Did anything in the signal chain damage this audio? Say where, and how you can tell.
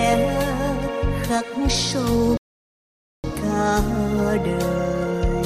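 Yes: a rebuffering stall at playback, silence from 2.37 to 3.24 s. The player starved for data, then resumed exactly where it stopped, adding 0.87 s without losing any sound, unlike a dropout.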